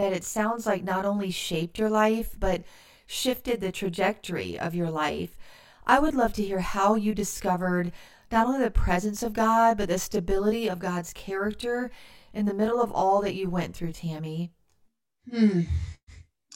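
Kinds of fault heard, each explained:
Channel delay (comb filtering): The speech sounds rough and slightly doubled from start to finish. One channel arrives around 20 ms behind the other, and when the two are summed to mono, the content they share cancels at regularly spaced frequencies. The first notch falls very low, near 20 Hz, and further notches repeat up through the spectrum, staying fixed in place for the whole clip.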